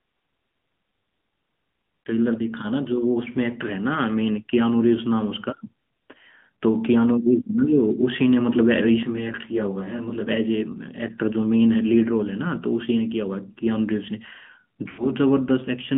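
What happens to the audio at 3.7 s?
AMR narrowband mobile codec damage runs through the whole clip, including 3.7 s: speech squeezed to 150 Hz–3.5 kHz sounds buzzy and synthetic, fitting a high-rate mode near 10.2 kbps.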